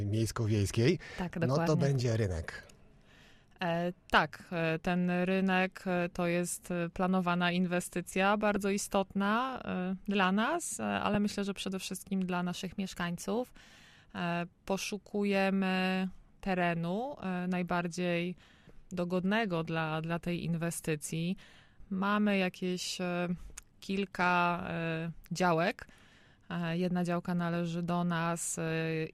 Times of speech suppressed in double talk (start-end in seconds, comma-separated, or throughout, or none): none